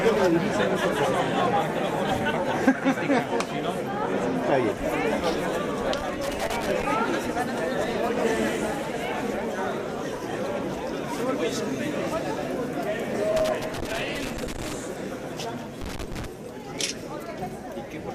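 Three bursts of loose connector crackle break up the audio, from 5.98 to 6.84 s, from 13.37 to 14.73 s and from 15.81 to 16.26 s. A worn or dirty contact is making and breaking as it shifts, so the signal is chopped on and off. In the waveform these stretches look ragged, with dropouts and sharp spikes, and a spectrogram shows irregular vertical streaks of broadband energy across them.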